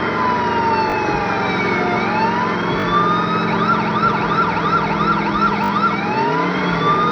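At 0.9 s, 2.8 s and 5.64 s a repeated buffer makes a brief stutter. Each time, playback ran out of fresh audio and replayed the last chunk twice, three times at 5.64 s, with a hard join at each repeat. The repeats are about 20 ms long, which fits a 20 ms buffer. On a waveform, identical short segments repeat end to end. On a spectrogram, a vertical seam marks each join.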